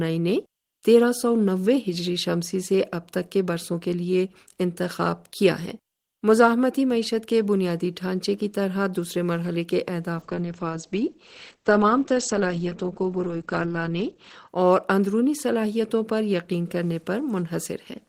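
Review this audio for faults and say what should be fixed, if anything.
From 10.17 s to 14.54 s there is a call bitrate drop. The encoder coded more coarsely, so the speech turns rough and muffled. The top end falls from 20 kHz to 8 kHz, lowest for 4.16 s. This fits a fall from about 32 kbps to 12 kbps. Smoothing the bandwidth estimate and setting a higher minimum bitrate would keep brief network dips from starving the encoder.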